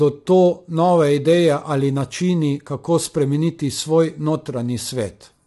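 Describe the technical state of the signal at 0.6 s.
The signal at 0.6 s, like the whole clip, has likely been squeezed through low-delay AAC compression, whose short frames resolve pitch harmonics poorly at a rate consistent with about 32 kbps. The speech sounds rough and grainy, with noise between harmonics and nothing above 11.7 kHz.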